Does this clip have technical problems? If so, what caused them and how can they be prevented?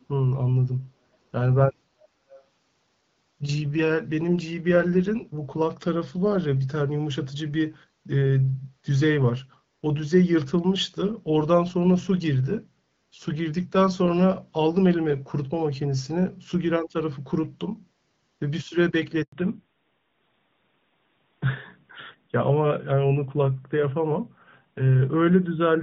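Yes. Two brief echo leaks appear, at 0.00 to 0.06 s and 2.35 to 2.41 s: a faint, delayed ghost of the speech trails the original by about 0.48 s. The first is very faint, roughly 40 dB down, and the second is clearer at about 25 dB below the speech. The likely cause is a far end on a loudspeaker whose echo canceller let part of the microphone pickup slip back into the call. Better echo cancellation at that end, or a headset instead of a loudspeaker, would prevent it.

At 19.22 s there is a handover gap: the speech fades and drops to silence for 100 ms before resuming at 19.32 s. During that moment the phone switched networks and no speech frames got through, so whatever was said in that tenth of a second is gone. The gap is short but complete, with nothing to smooth over it. Keeping the device on a stable network, or using handover modes that overlap the old and new links, prevents such dropouts.

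From 19.32 s to the end, a fallback to narrowband follows the handover. Until then the call carries the brighter sound of HD Voice wideband coding. After it, everything above 4 kHz disappears, and the speech sounds duller, more muffled and rougher. This fits the link renegotiating onto the older AMR-NB codec after the network change. Ensuring both networks and devices support AMR-WB, so HD Voice survives handover, would prevent the drop in quality.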